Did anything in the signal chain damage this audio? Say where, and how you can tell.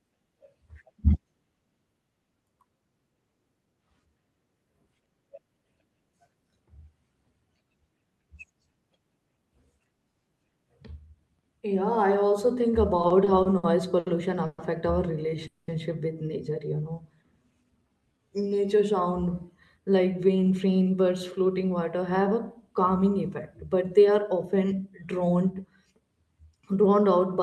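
Yes. At the network and jitter-buffer stage, packets repeatedly arrived late from 12.97 to 14.08 s, and the receiver stretched the last sound across seven short gaps (longest 70 ms). The speech stutters and drags.

Two call audio freezes follow, at 14.46 to 14.60 s and 15.47 to 15.70 s, likely from packets held in transit. The last sound is continued as a fading buzz for 120 ms and 210 ms before the speech resumes.

A jitter buffer slow-down from 16.76 to 18.54 s repeats pitch periods to rebuild its reserve, adding about 216 ms. Speech runs at 88% speed, pitch unchanged.

A jitter buffer speed-up from 20.22 to 26.08 s trims pitch periods to shed excess delay, removing roughly 0.4 s. Speech runs about 7% fast and sounds hurried.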